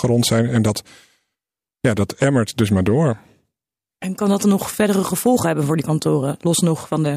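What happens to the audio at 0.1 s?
Nothing goes wrong at 0.1 s; the audio there is intact, with no dropout, click or other fault.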